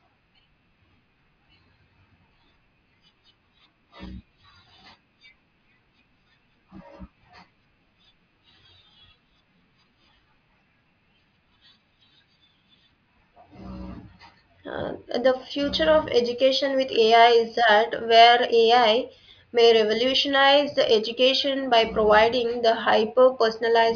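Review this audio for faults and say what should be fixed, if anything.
No faults turn up anywhere in the recording. Nothing needs to be fixed.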